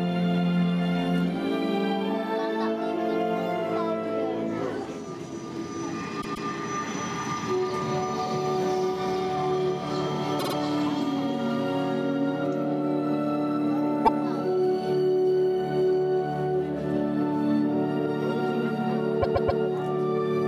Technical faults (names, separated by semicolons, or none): repeated frames